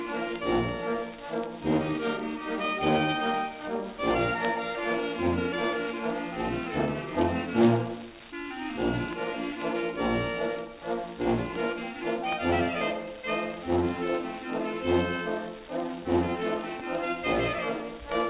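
Nothing is technically wrong with this clip.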